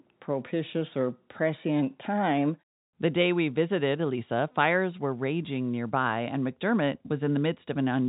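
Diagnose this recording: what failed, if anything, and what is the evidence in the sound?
Nothing failed; the speech is carried over a normal G.711 telephone path, with the sound topping out around 3.8 kHz as that path allows.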